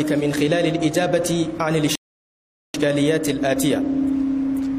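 At 1.95 s the audio drops into silence and stays there until 2.74 s, a rebuffering stall lasting about 0.79 s. Playback ran ahead of the downloaded data, so the player halted and waited for more to arrive. When the stream resumes, it picks up at the exact point where it stopped, with nothing skipped or repeated. The result is a clean gap that adds roughly 0.79 s to the running time.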